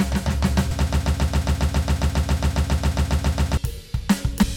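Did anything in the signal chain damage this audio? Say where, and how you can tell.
Yes, two kinds of damage, both downstream of capture.

Compressed frames skipped, at the codec or storage stage: at 0.70 s and again at 4.41 to 4.43 s the music jumps forward, losing about 400 ms and about 150 ms respectively. Each join is a short smeared blip rather than a sharp click, because the overlapping frames on either side blend across the gap. The jump sizes fit whole multiples of a 23.2 ms frame. On a spectrogram the musical content shifts abruptly at a vertical seam with a broadband smudge, not a thin click line. The waveform envelope changes suddenly there.

Broken-record loop, at the playback or streaming stage: from 0.87 s to 3.57 s a 136 ms fragment repeats exactly, back to back, 20 times, and the music that should have played during those seconds is gone. The likely cause is a stalled player or stream that kept re-sending the last buffer it held. 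On a spectrogram this shows as an identical pattern tiled at a fixed interval. The waveform shows the same shape copied end to end with a regular seam every 136 ms.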